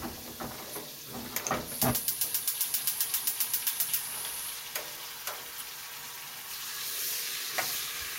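A recording of sounds, with no technical fault to be heard anywhere in it. Nothing in the audio calls for a time or a cause to be pointed out.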